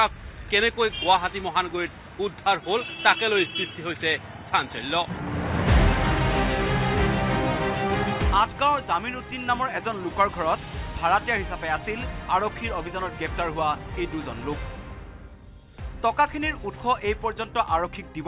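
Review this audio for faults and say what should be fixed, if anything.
Nothing in the signal needs fixing: the audio comes through intact and stable, with no audible defect at any point.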